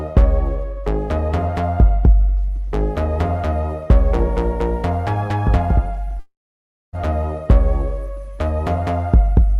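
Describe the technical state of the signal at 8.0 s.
At 8.0 s the signal is intact, with no audible technical fault at that point.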